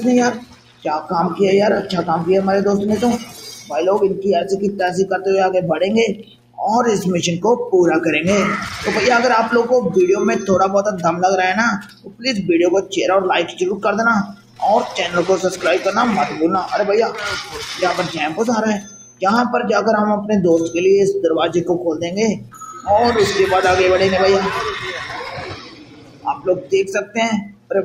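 A steady mains hum at 60 Hz runs under the whole recording, sitting roughly 15 dB below the programme, most likely from a ground loop or a nearby transformer feeding the power line into the signal path. On a spectrogram it is an unbroken horizontal line at 60 Hz, with fainter lines at its low harmonics. A noise suppressor built for speech was also left running on material that is not speech. It treats sustained tones, ambience and reverb as noise, so the level pumps and flutters by around 10 dB as it clamps and releases. The waveform shows the envelope repeatedly ducking after each onset, and the spectrogram shows tails and held energy smeared away in patches. The worst of this is sound cut by the noise suppressor at 0.33–1.11 s, 3.18–3.72 s, 6.14–6.59 s, 11.79–12.93 s, 13.5–14.62 s, 17.44–19.23 s, 22.35–22.87 s and 25.26–27.71 s. Drops reach about 11 to 17 dB, and the last stretch is affected for nearly two seconds. 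These appear as sudden hollows in the waveform and dark gaps across the spectrogram where sustained content should continue.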